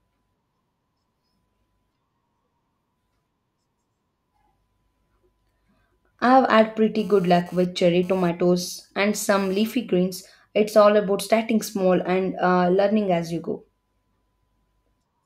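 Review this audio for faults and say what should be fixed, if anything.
A nearby 2G handset, transmitting radio bursts about 217 times a second during a data transfer, was picked up and rectified by the audio circuitry from 6.99 s to 9.74 s. This produced GSM phone buzz: a hard, raspy 217 Hz tone rich in harmonics, coming and going about 28 dB below the speech. Keeping mobile phones well away from microphones, cables and interfaces, or using properly shielded equipment, prevents it.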